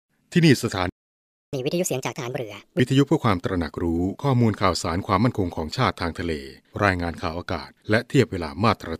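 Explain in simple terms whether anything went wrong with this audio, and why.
The player most likely ran short of data, or was briefly blocked, causing a playback stall. From 0.90 to 1.53 s, about 0.63 s, the voice cuts out mid-flow into silence, then resumes where it stopped.

To make up that lost time, the player used catch-up at higher speed. From 1.53 to 2.80 s the speech runs 1.5 times too fast, so the voice sounds rushed and about seven semitones higher, like a chipmunk effect, before settling back to normal.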